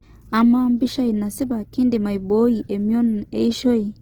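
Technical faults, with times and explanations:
Throughout, Opus compression: speech sounds rough and grainy with noisy fill, likely from a low-bitrate encoder whose music mode keeps band energy but substitutes noise for detail.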